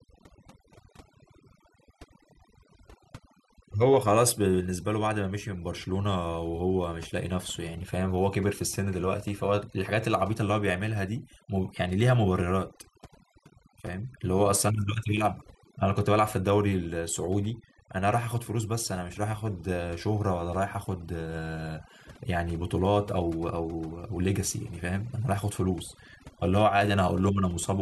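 From start to finish the speech carries overdone noise removal. A noise reducer was pushed far too hard, so any frequency band sitting close to its idea of the noise gets pulled way down or switched off. The softer parts of the voice get caught in that too. You end up with a background that drops away and breaks up into little twinkling specks.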